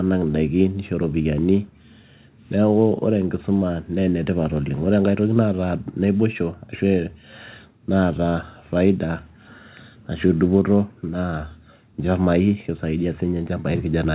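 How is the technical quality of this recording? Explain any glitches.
The technical quality holds up, with no glitches to explain.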